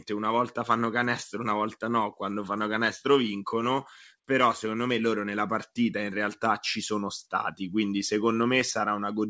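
No technical fault can be heard in this speech recording; it has come through a WebRTC call path whose G.722 codec leaves nothing above 8 kHz, as expected for that wideband call codec.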